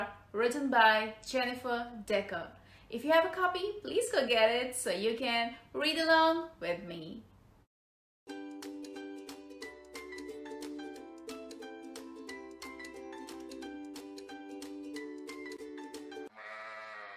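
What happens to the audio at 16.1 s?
Nothing goes wrong at 16.1 s; the audio plays through that moment intact, with no dropout, click or distortion.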